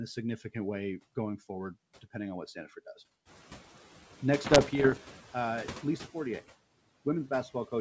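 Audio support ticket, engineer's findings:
Noise suppressor artifacts, throughout. Suppressor attenuating bands it judges to be steady noise by about 8 dB, frame by frame. Residual background dips between phrases and swells under speech. Room noise stepping up about 14 dB near 3.5 s shows through this pumping.

Bit errors on an ADPCM link, 4.46 to 4.98 s. Wideband G.722 path taking flipped bits at an error rate of around one percent. Each error knocks the decoder's step size and predictor off track, so the damage rings on for milliseconds. Heard as pops, rough bursts and brief level jumps.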